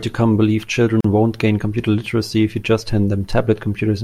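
At 1.01 s the speech drops out. Silence holds until 1.04 s, about 39 ms in all. This is a gap at a join of encoded pieces. The audio was encoded in sections and joined untrimmed. The encoder's start-up silence and the padded final frame both stayed in. The codec smears the edges of the hole. The speech then resumes exactly where it broke off.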